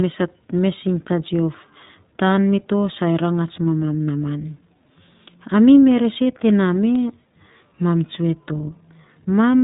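From start to finish the speech carries the sound of the iLBC codec, and the damage is plainly audible. Everything above 4 kHz is gone, leaving a narrowband, telephone-like band. The excitation in each 20 ms frame is coded on its own, without drawing on the previous frame, and at what sounds like around 15 kbps the result is intelligible but slightly rough and synthetic.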